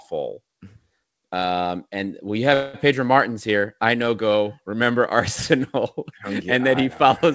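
At 2.54 s, right after "and we", the speech stalls for about 0.2 s, until 2.76 s. This is a call audio freeze: the last sound is stretched into a short fading buzz or hiss rather than dropping to silence, and the speech then resumes exactly where it stopped, with nothing lost. The likely cause is delayed packets draining the jitter buffer, so the gap pushes everything after it later. The call codec band-limits the audio at 8 kHz, which fits G.722.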